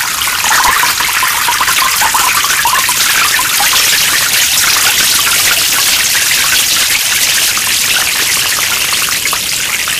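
A recording of sounds, with hard clipping for its whole length. The signal was driven about 25 dB past what a stage in the chain could pass. Every peak was sliced flat at that ceiling. Roughly one sample in seven sits pinned against the limit. Those squared-off tops add harmonics high in the spectrum. The result is a harsh fuzz on every loud sound, not just crackle on the odd peak.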